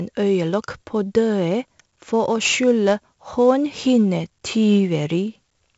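From start to finish the speech carries 4-bit ADPCM compression damage, and it is heavy. Each sample is coded as a coarse step from a prediction, leaving gritty hiss that rises with loud passages. Nothing reaches above 7.7 kHz, which fits 64 kbps at a 16 kHz rate.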